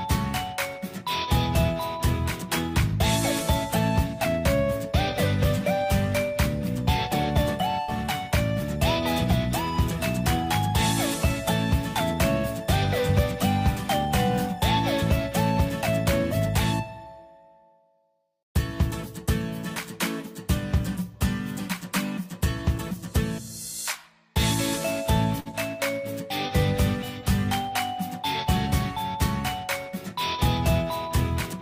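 The audio has two bursts of packet loss, at 7.81 to 7.91 s and 25.40 to 25.48 s. Each time, the last sound is held and faded for 65 and 55 ms. Playback then resumes with about 60 ms of audio missing.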